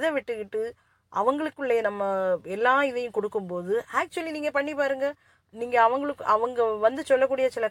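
A speech recording with nothing technically wrong to report. No fault can be heard anywhere in it.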